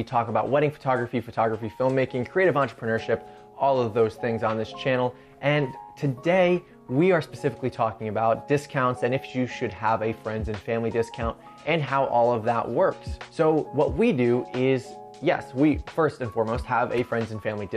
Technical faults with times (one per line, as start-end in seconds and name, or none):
none